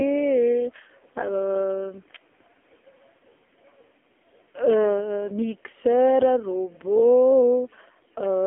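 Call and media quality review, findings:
AMR narrowband mobile codec across the whole clip. Speech sounds buzzy and synthetic, with heavy codec damage. Band-limited to a telephone line, roughly 300 Hz to 3.5 kHz, with nothing above 3.8 kHz. Component: AMR-NB speech coder. Mechanism: a vocal-tract model driven by sparse pulses, rebuilding the voice at 8 kHz sampling. The coarseness fits a low mode near 5.9 kbps.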